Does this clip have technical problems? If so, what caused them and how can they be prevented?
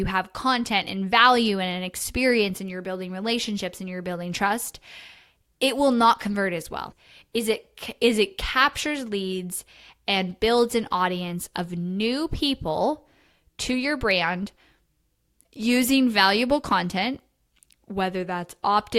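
Yes. At 6.90 to 6.93 s the speech jumps abruptly forward with a brief blip, the likely result of a stream segment skipped: one segment of the segmented stream failed to load and the player moved straight on to the next, dropping a second or more of the programme. Unlike a buffer underrun, which inserts a silent pause and then resumes where it stopped, nothing here is paused; material is simply missing. Retrying failed segment requests before advancing would prevent it.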